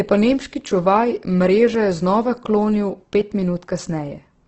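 Throughout, the speech sounds rough and grainy, with nothing above 8.2 kHz. The likely cause is heavy Opus compression at about 12 kbps: noisy texture, not MP3-style swirling.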